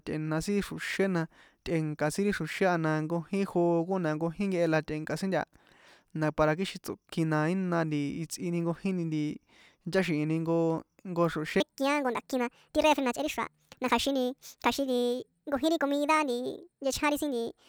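Speech runs at its proper speed until 11.60 s. From there to the end at 17.68 s, the section at the wrong speed plays about 1.55 times too fast. Pitch and tempo jump together at that moment. The voice turns high and hurried, roughly seven semitones up. Nothing in the speech itself explains the change. The likely cause is that this stretch was played back or edited against the wrong clock rate.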